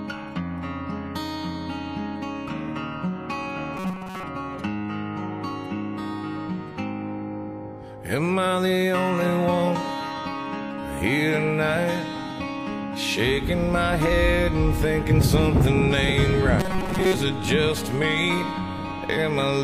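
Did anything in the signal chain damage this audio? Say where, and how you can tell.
Yes, robotic sound from repeated short buffers at 3.77–4.24 s and 16.60–17.14 s: a rigid 188 Hz buzz, likely buffer underruns looping about 5.3 ms, replacing most audio, unlike dropout silence.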